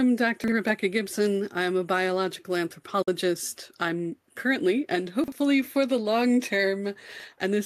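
Three times in this speech clip you get chunks out of order: around 0.44 to 0.52 s, 5.24 to 5.32 s and 7.12 to 7.24 s. Each is a brief jumbled stutter, because a 40 ms slice of audio turned up late and played after the material that should have followed it. In the first two it's one chunk behind, and in the last it's two behind, so that one scrambles a bit longer. Nothing's missing there, just reshuffled, with hard joins where the pieces meet. Separately, at about 3.02 to 3.08 s there's a digital broadcast dropout. The sound fades out over roughly 8 ms and leaves a hole of about 48 ms, which fits the receiver losing a couple of frames or having them fail their checks. It mutes until clean data comes back, and whatever was sent during that gap is simply gone.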